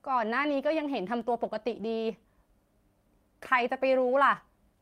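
At 1.35 to 1.37 s there is a lost packet rebuilt from error correction: a 20 ms stretch, which fits one missing packet, was replaced by the low-bitrate copy carried in the next packet. Unlike plain concealment, there is no gap or smeared repeat, only a brief rougher, noisier patch in the speech.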